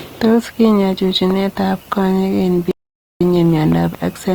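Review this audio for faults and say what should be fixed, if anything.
The speech carries plainly audible Opus compression throughout. It sounds grainy and rough rather than swirly, as bands starved of bits are filled with folded or noise-like content instead of being left empty. The bandwidth stays full, with content reaching about 20.3 kHz, so the damage is texture rather than muffling. The coarseness points to the codec's music (CELT) mode at a low rate, which fits roughly 24 kbps. To prevent it, encode at a higher bitrate or keep an uncompressed master for delivery.

A loud pop lands at 1.31 s, a single sharp click lasting about 20 ms. A pair of pops follows between 3.72 and 3.97 s. Each peaks at roughly 10 dB above the surrounding speech, and the sound carries on underneath them. This is the signature of a voltage step or pulse entering the chain, likely from a connector, a switch, static discharge or a driver glitch. 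To prevent it, secure the cables and switching and check the interface drivers before recording.

An audio dropout to silence runs from 2.71 to 3.21 s, cutting out about 0.5 s in mid-flow. The gap is silent with no room tone, which means the recorder kept writing silence after its input vanished. A disconnected device, a failed link or an accidental mute is the likely cause. The speech in that span is lost and must be re-recorded. To prevent it, lock down the input connections and monitor input levels during capture.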